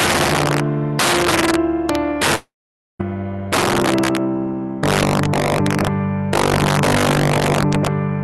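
Integer overflow runs through the whole clip. The signal is driven about 8 dB past full scale, and around 4 percent of samples exceed the limit. Those samples are not held at the ceiling. They wrap to the opposite sign and jump across the full range. Each loud peak therefore becomes a violent crack, harsher and sharper than ordinary clipping. The cracks follow the loudest moments.

From 2.35 to 3.01 s, about 0.64 s of audio is missing. The last sound continues briefly as a fading buzz. Then roughly half a second of silence follows. The sound resumes at 3.01 s, but the lost stretch never returns. The likely cause is a long network dropout on the call path, where the receiver fills the gap it cannot recover.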